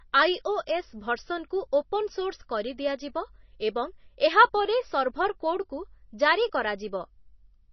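Likely heavy MP3 compression at a very low bitrate runs throughout, cutting everything above 6 kHz and leaving the speech dull, watery and swirling, with smeared consonant attacks.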